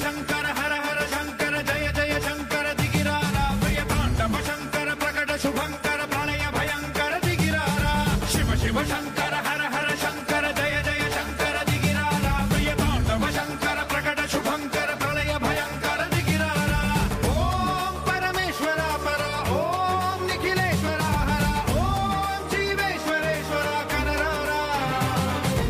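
From 10.79 to 12.16 s, GSM phone buzz: rectified 217 Hz radio bursts give a steady, raspy drone, seen on a spectrogram as evenly spaced harmonic lines.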